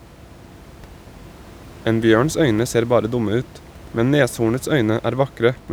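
Nothing goes wrong technically anywhere in this speech clip, and the only thing sitting underneath it is a bit of room noise about 22 dB below the speech, which just comes from the space the microphone was in.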